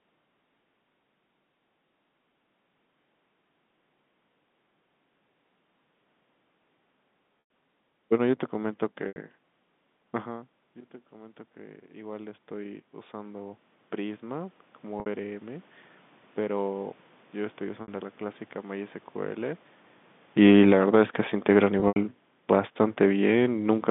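Telephone-band speech, carried in G.711 with its 150 Hz to 3.6 kHz line band, suffers packet loss with pitch repetition five times. The receiver bridges each gap by repeating the last pitch period and fading it out: 100 ms at 7.4 s, 80 ms at 9.08 s, 60 ms at 15.0 s and 17.82 s, and 100 ms spread over 160 ms from 21.8 s, with its longest run 80 ms. Each sounds like a briefly held, buzzy tone that thins before the speech cross-fades back. The lengths fit runs of 20 ms packets. The automatic gain rises from 11.11 to 15.74 s. The talker drifts away around 10 s and the input falls by about 19 dB, so the control slowly adds about 11 dB. The voice and the room noise swell together over those seconds, still ending quieter than before, and the 15.0 s dropout falls inside the swell. The automatic gain falls from 20.27 to 23.86 s. After the talker moves around 20 s, the control pulls its gain down by about 7 dB, so the speech sinks along with the background, with the 21.8 s dropout inside the slide.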